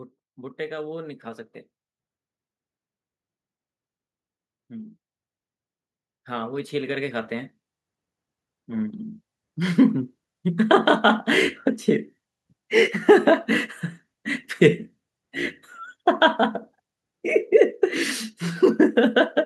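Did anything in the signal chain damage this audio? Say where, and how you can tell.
Yes. The damage comes from call processing: automatic gain rising. From 0.35 to 1.3 s the level climbs by about 4 dB, and from 6.26 to 10.21 s it climbs more slowly by about 9 dB. The gain control judged the input too quiet and raised amplification gradually. The background noise swells together with the speech, which separates this from a talker moving closer to the microphone, where only the voice would grow louder.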